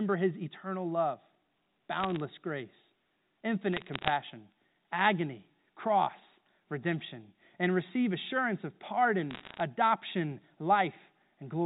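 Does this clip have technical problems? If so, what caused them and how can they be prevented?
Yes. Bit errors on a digital phone line flipped bits in the G.711 A-law stream at roughly 0.4–0.5 percent, so single corrupted samples burst out as sharp ticks and crackle over the speech at 2.0–2.2 s, 3.73–4.10 s and 9.31–9.6 s, just after "and receive assurance of". Error-checked transmission with concealment, or a cleaner, better-shielded line, prevents this.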